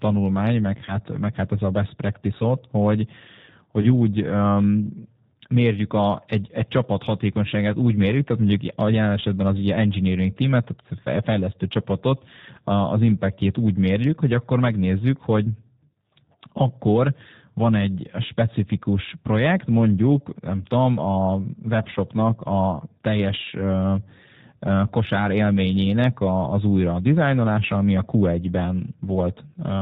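A speech recording carried through the G.729 codec at 8 kbit/s, with plainly audible coding damage throughout. The voice is rebuilt from a filter, pitch predictor and sparse pulses, so it sounds rough and slightly synthetic, and a spectrogram shows everything above 4 kHz cut away. VoIP packet loss concealed by the speech codec occurs at 0.86–0.96 s and 3.81–4.06 s. Each gap fits a single lost 20 ms packet, which the decoder likely filled by extrapolating from the previous frame. The waveform shows decaying amplitude, with weakened output lingering after each loss.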